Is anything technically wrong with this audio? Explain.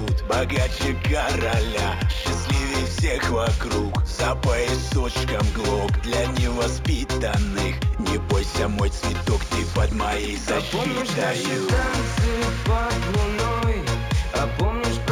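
Yes. Throughout the clip there is imaging from linear upsampling. The sound fits material at 16 kHz raised to 44.1 kHz by drawing straight lines between samples, a weak filter that dulls the top of the original band and lets a mirrored copy of the spectrum through between 8 kHz and 16 kHz, roughly 25 dB below the signal. It gives a faint metallic shimmer on sibilant and bright sounds. A spectrogram would show a faint reflected band above 8 kHz.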